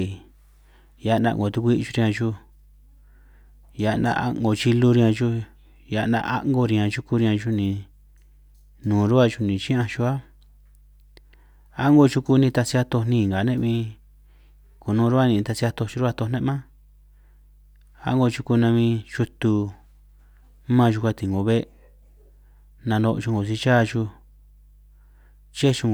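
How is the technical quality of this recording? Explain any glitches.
The recording is compromised by one fault. Mains hum runs throughout: a ground loop or nearby transformer leaks the 50 Hz supply into the speech, about 30 dB down, showing as a steady horizontal spectrogram line.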